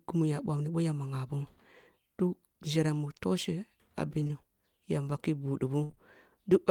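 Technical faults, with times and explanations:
4.19 to 4.31 s: short concealed packet loss, three 20 ms losses in a row, starting at 4.19, 4.23 and 4.27 s. Each time the receiver bridged the hole by extending the sound just before it, then blended back into the real signal, so this stretch smears and wobbles briefly.
5.83 to 5.91 s: burst of packet loss. About 60 ms arrived too late or not at all. The receiver held the preceding sound and faded it as the gap went on, giving a brief buzz or hiss, and the audio resumes with that part missing.
5.91 to 5.98 s: short concealed packet loss, two more 20 ms gaps at 5.91 and 5.95 s, filled for 16 ms and 14 ms. These trailing patches extend the burst's smear.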